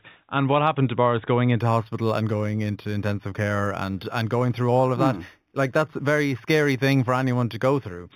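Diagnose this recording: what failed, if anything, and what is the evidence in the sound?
The failure is in sample-rate conversion: imaging from linear upsampling, from 1.6 s to 8.12 s. The speech loses its top end, and a faint metallic shimmer rides on sibilants, sitting roughly 25 dB below the signal with its first mirrored band between 4 kHz and 8 kHz. That fits a rate raised from 8 kHz to 48 kHz by straight-line interpolation, whose weak filtering leaves reflected copies above the original band. Unlike codec artefacts, the shimmer is steady and mirrors the speech spectrum rather than warbling.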